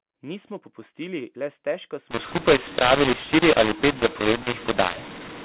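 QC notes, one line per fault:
2.11–5.45 s, mu-law and A-law mixed up: from just after "popustili le stežka", the mu-law-coded telephone stream is decoded with the A-law table, so every sample level is remapped wrongly. Loud and soft values scramble, making the speech harsh and distorted, and near-silent gaps rise into audible noise.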